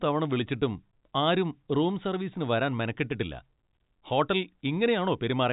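No technical faults can be heard in this speech. It has the narrow telephone band of G.711 A-law coding at 64 kbps, with nothing above 4 kHz and at most a faint quantisation hiss that rises and falls with the signal.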